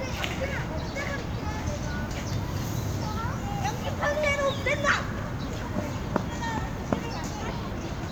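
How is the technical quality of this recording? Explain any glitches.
No technical faults are audible.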